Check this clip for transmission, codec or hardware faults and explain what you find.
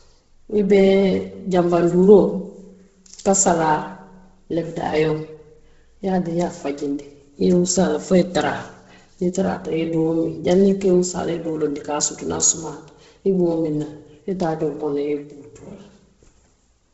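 There's one fault, and it runs through the whole recording: the speech is likely going through Bluetooth LC3 compression. Nothing comes through above 7.7 kHz. The codec seems starved of bits, so it drops upper spectral detail and fills it with noise. That gives the speech a heavy breathy, grainy edge, which fits a low rate of around 16 kbps.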